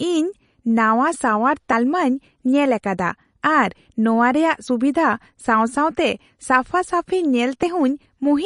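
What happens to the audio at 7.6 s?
At 7.63 s there is a skip: roughly 50 ms of audio is gone and the two sides butt together with no gap. This is audio missing between chunks, likely from a recorder working in 3-second blocks dropping a sliver at each handover.

Throughout the clip, including this moment, the speech has a watery, swirly quality and nothing above 10.6 kHz. That points to MP3 compression, likely at a low bitrate around 40 kbps, with the encoder cutting the treble and letting weak frequency lines flicker between frames.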